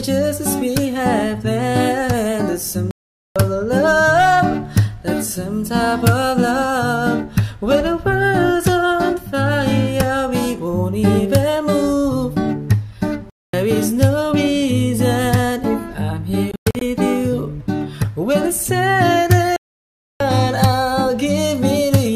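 At 2.91, 13.30, 16.52 (broken gaps within 0.3 s) and 19.56 s, the sound cuts to silence for 0.45, 0.23, 0.19 and 0.64 s, then resumes further on. This is likely a Bluetooth dropout, with packets arriving too late to play.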